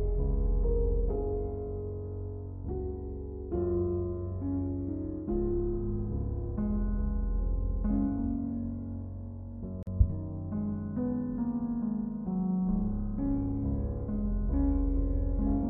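At 9.83 s the sound drops out for 42 ms, then carries on: a gap at a join of encoded pieces, with encoder padding left in.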